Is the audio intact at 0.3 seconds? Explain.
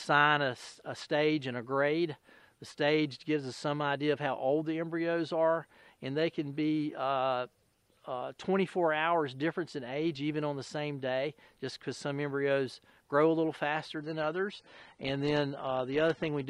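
Yes, the audio is intact at 0.3 seconds, with no dropout, click, distortion or other fault at that moment.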